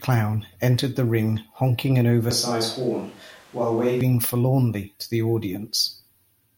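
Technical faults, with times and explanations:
2.31–4.01 s, switch to a distant microphone: the close microphone's feed likely dropped out, leaving a pickup further from the talker. The speech turns suddenly roomy, hollow and thin in the bass, drops about 5 dB, and gains room noise roughly 30 dB below it, then snaps back.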